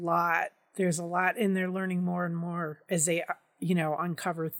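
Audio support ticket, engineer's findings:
Findings: no audible fault found in the speech recording.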